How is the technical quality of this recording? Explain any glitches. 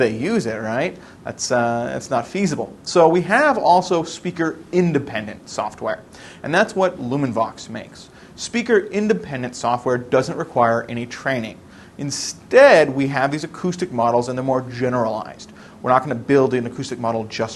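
No glitches or technical faults can be heard anywhere.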